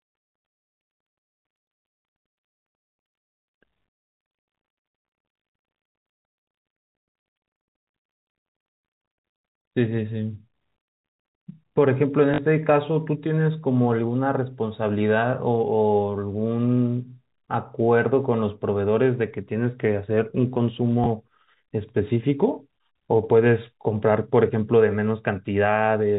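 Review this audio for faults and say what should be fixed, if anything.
Packet loss with last packet repeated occurs at 12.34 to 12.38 s and at 21.04 to 21.06 s. To fill each gap, the receiver replays the previous packet. The 40 ms hold at 12.34 s produces a short robotic stutter, which fits two lost 20 ms packets. The 20 ms hold at 21.04 s fits a single packet.

To prevent it, reduce loss on the network path with a jitter buffer or forward error correction, and replace plain packet repetition with pitch-aware loss concealment.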